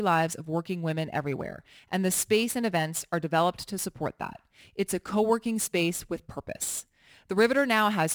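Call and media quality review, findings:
Crude rate conversion throughout, whole speech clip. Gritty inharmonic fizz riding on louder, brighter syllables. Looks like a 48 kHz to 44.1 kHz resampler just picking nearest samples, no filtering. Drop pattern repeats at a fixed beat, error sitting about 20 dB under the signal.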